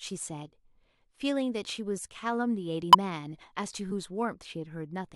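At 2.93 to 2.95 s and again at 3.86 to 3.92 s, compressed frames are skipped: the decoder drops whole frames, so the speech jumps ahead about a tenth of a second, then about 20 ms.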